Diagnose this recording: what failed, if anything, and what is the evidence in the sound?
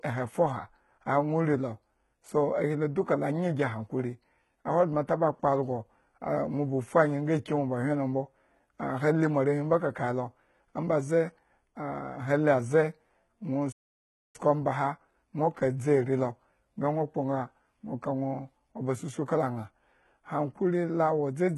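Codec stage, likely HE-AAC near 16 kbps: the treble is rebuilt from copied lower bands, so s sounds turn gritty and lispy.

Playback stall, likely a starved or blocked player: the sound drops to silence from 13.72 to 14.36 s, about 0.62 s, then resumes at "omba aha nwo".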